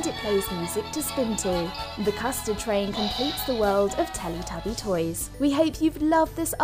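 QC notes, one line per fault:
No faults detected.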